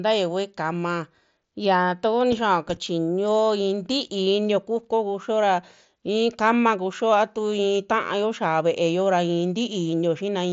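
No technical faults can be heard anywhere in this speech clip.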